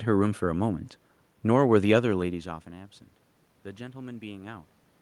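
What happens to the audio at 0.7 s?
Nothing goes wrong at 0.7 s; the speech continues intact, with only the background noise of the room beneath it.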